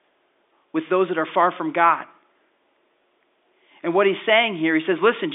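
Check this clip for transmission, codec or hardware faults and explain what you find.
No transmission, codec or hardware faults turn up anywhere in this speech. The audio carries the narrow band of G.711 telephone coding, with the line passing roughly 250 Hz to 3.6 kHz and nothing above that.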